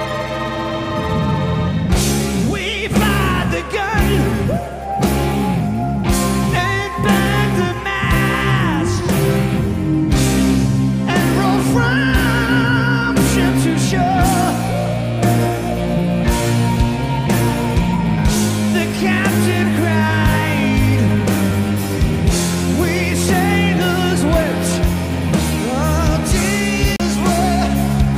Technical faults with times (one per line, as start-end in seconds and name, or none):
26.96-27.00 CD skip